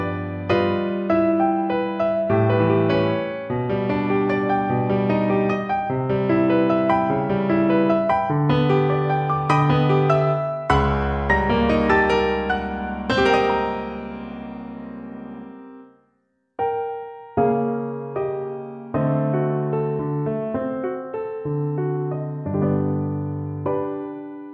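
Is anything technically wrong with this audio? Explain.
No, nothing is technically wrong with this audio.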